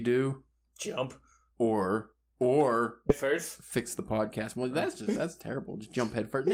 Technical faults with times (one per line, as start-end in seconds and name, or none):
3.09-3.11 skip ahead
3.78-6.51 jitter buffer speed-up